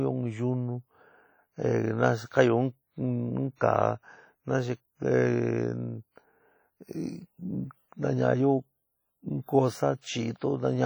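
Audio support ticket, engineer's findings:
Heavy transform-codec damage across the whole speech clip: ringing, washy smearing, hiss breathing with the signal. Likely WMA compression at a low bitrate, consistent with roughly 32 kbps. Long-block quantisation noise spreads over tens of milliseconds, and weak spectral lines are zeroed.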